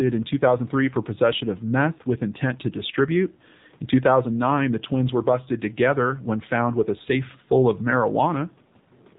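From start to finish the speech has the sound of an AMR narrowband mobile codec, the old 2G/3G phone-call link. Everything above 4 kHz is gone, so sibilants lose their edge and the voice turns boxy. The codec rebuilds the voice from a vocal-tract model fed by sparse pulses, and here that leaves a plainly audible buzzy, synthetic grain, which fits one of the lower bitrates, around 7.4 kbps.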